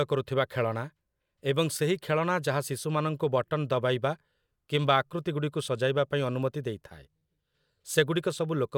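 No technical faults can be heard anywhere in this speech recording. There is no moment in the audio that calls for a time mark or closer inspection.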